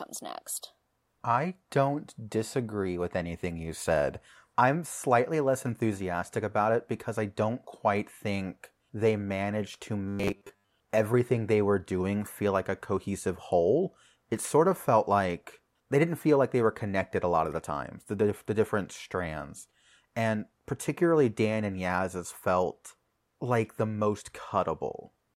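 From 10.09 to 10.70 s, robotic sound from repeated short buffers: a fixed 100 Hz metallic buzz, not gaps, likely a 10 ms buffer repeating.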